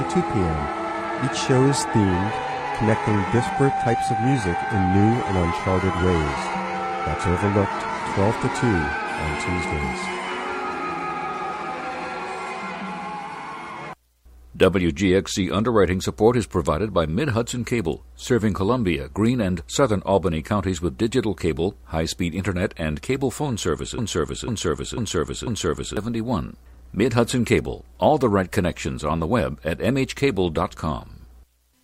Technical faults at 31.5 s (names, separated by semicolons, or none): none